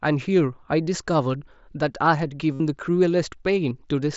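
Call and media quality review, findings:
Concealed Bluetooth headset packet loss over the mSBC link at 2.54–2.60 s: a 67.5 ms gap filled by repeating the best-matching slice of recent waveform, giving a buzzy, full-level held tone and a slight warble on recovery. A second, shorter 15 ms loss follows at 3.70 s.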